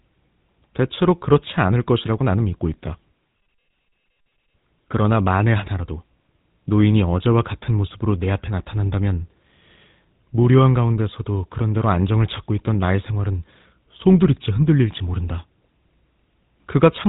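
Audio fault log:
Throughout: GSM full-rate codec. The speech has the buzzy, gravelly roughness of the first GSM codec, and the damage is plainly audible. Nothing survives above about 3.8 kHz. The codec rebuilds the voice from a vocal-tract model driven by sparse, regularly spaced pulses, and that thinned excitation is what grinds. Plain band-limiting would only dull the sound. This roughness also fits a bitrate near 13 kbps.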